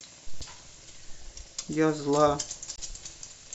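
At 0.38 s and again at 2.73 s, damaged data in the compressed stream makes the decoder misread frames and lose sync, giving brief glitches of about 40 and 60 ms. Each appears as a broadband smear or abrupt discontinuity breaking the speech's harmonic pattern on a spectrogram.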